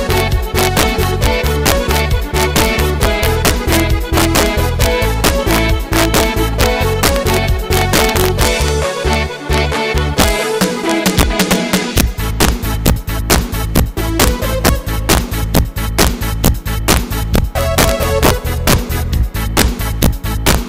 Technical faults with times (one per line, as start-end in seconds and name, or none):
0.00-20.68 integer overflow